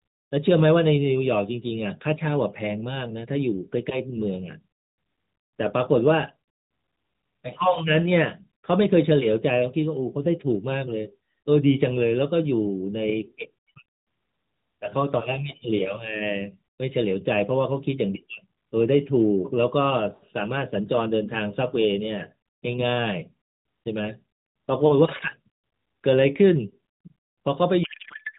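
From 27.84 s to the end at 28.39 s, the speech gives way to garbled noise and warble that barely tracks it. This is a codec payload misread. The AMR narrowband path, band-limited below 4 kHz with light coding damage that fits its 12.2 kbps mode, is sending octet-aligned frames, but the receiver parses them as bandwidth-efficient. Every field lands in the wrong bit position, so plausible frames decode into nonsense.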